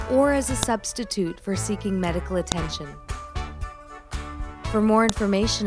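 Three sharp clicks break into the audio, at 0.63 s, 2.52 s and 5.09 s. Each lasts only a couple of milliseconds. They point to a file header played as audio. The clip was built from separate WAV pieces joined or streamed without stripping their headers. Those header bytes were read as sample values, so each new piece opens with a snap. It lands no matter what the sound is doing at that instant.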